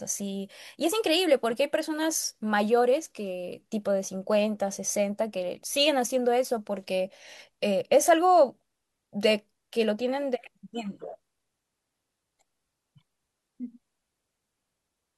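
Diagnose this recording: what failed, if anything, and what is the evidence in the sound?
Nothing in the signal chain appears to have failed: the speech arrives as one continuous, undistorted signal, with no break, level jump, or added noise anywhere along its path.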